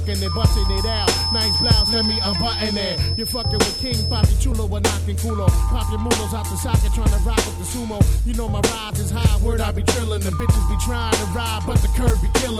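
At 4.52, 8.9, 10.4 and 12.1 s, abrupt jumps skip roughly 20 ms (about 40 ms at 12.1 s), likely dropped buffers (overrun); each shows as a waveform step and a thin vertical spectrogram line.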